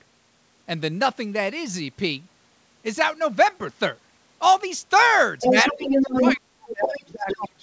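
Speech, with nothing above 8 kHz, which fits a wideband call codec such as G.722 at 64 kbps. From 5.4 to 6.36 s a second voice runs under the talker at roughly the same level. It returns from 6.7 to 6.98 s, about 5 dB lower, and from 7.28 to 7.48 s, about 10 dB lower. This is other side's voice leaking through. The far end was likely playing on a loudspeaker and was not fully removed by the echo canceller. While that voice is present, the main talker dips by about 5 dB for about 50 ms at 5.5 s and again at 5.72 s. From 6.22 s to the end the talker is pushed down by as much as about 40 dB, nearly out of the recording, while the leaked voice at 6.7 and 7.28 s stays audible. This is speech suppressed in double talk. The echo canceller likely could not tell the near talker from the loudspeaker echo and turned the talker down along with it.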